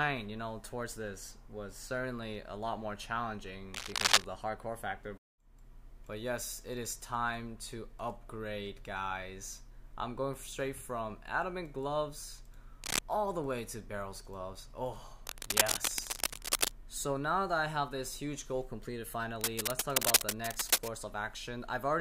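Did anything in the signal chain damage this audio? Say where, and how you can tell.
Yes. Cable scratch noise appears at 3.74–4.26 s, 12.83–12.99 s, 15.27–16.72 s and 19.41–20.91 s as dense, uneven rustling bursts riding above the sound, strongest in the first. The likely stage is analogue wiring, where a worn connector's contact resistance fluctuated as it moved.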